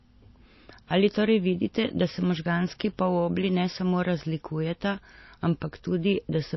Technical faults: MP3 compression; bit error spike

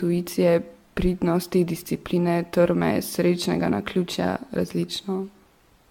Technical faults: generation loss

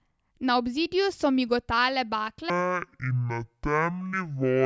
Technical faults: wrong sample rate

